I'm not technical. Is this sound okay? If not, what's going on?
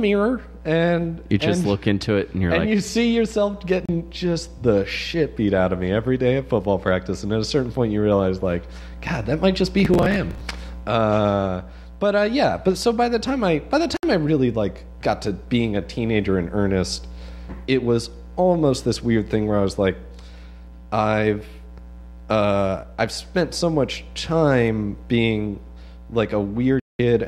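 No. Three times the receiver lost the digital broadcast signal and went silent until clean data returned. This digital broadcast dropout leaves short holes: a blink at 3.86 s, a slightly longer gap from 13.97 to 14.04 s, and a clear fifth-of-a-second silence from 26.80 to 27.00 s.

Between 9.80 and 10.41 s, the processor got too busy to prepare each tiny slice of audio, roughly a hundredth of a second each, in time. It missed over a dozen in a row and replayed old slices instead. This processor overload crackle sounds like a gritty, tearing crackle.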